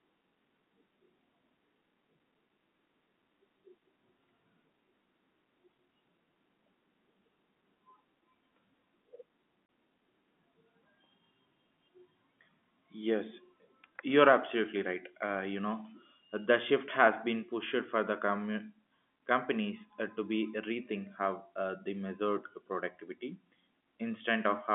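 A speech clip carried over a telephone-band line. At 9.66 to 9.69 s the sound drops into a 30 ms hole of silence, with hard edges. That is packet loss filled with silence. The gap length points to one lost packet, replaced by nothing.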